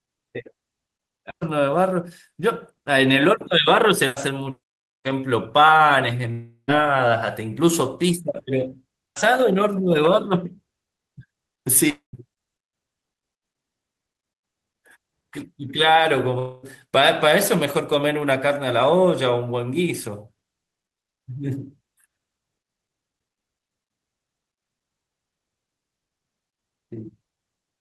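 At 6.31–6.71 s, 11.90–12.16 s and 16.39–16.65 s the speech breaks off, likely a long network dropout. A fading buzzy fill covers each gap, going briefly silent in the first two, and the speech resumes with about 0.24–0.36 s lost.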